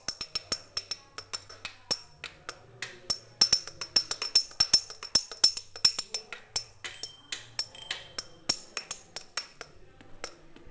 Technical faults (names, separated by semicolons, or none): short concealed packet loss